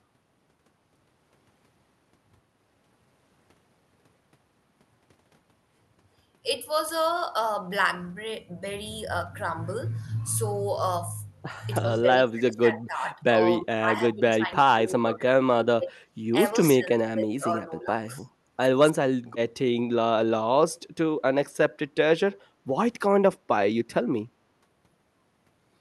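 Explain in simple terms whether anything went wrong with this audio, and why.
Two things go wrong here, both tied to the echo canceller on the call.

The first is speech suppressed in double talk. From 11.8 to 13.35 s, 13.6 to 14.53 s, 14.69 to 16.33 s and 16.73 to 17.9 s, the talker keeps sinking way down and then coming back. Shorter dips follow at 18.92 to 19.03 s, 22.28 to 22.32 s and 22.67 to 22.73 s. The likely cause is that both ends were talking at once, so the canceller couldn't tell this person apart from the echo and turned everything down.

The second is background gated by the echo canceller. From 18.25 to 18.42 s, the room sound briefly drops away for a fraction of a second and then returns. That happens because the canceller clamps down on the microphone while the loudspeaker is playing, and the background dips along with it until it lets go.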